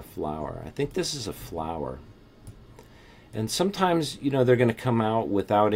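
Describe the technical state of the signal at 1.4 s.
Nothing at 1.4 s points to a technical fault; the signal is intact at that moment.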